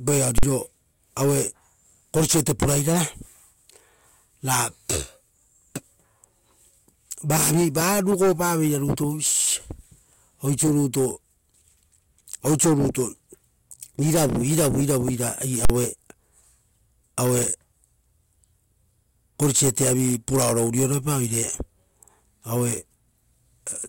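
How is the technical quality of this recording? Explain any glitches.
The speech is marred by two loud glitches. At 0.38 to 0.43 s and 15.65 to 15.70 s, invalid numbers at full scale: a calculation returned invalid values, pinning each roughly 46 ms block (fitting a 2048-sample block) at maximum level, heard as a sharp bang.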